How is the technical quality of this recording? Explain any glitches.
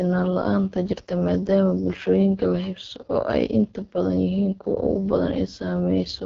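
Technical quality is poor: the speech has been through heavy low-rate voice coding for its whole length. AMR wideband (HD Voice) codec damage runs throughout. The coder models speech with a pulse-excited vocal-tract filter and pads the top band with shaped noise. The rough, raspy texture points to its lowest 6.6 kbit/s mode, and nothing sits above about 7.6 kHz.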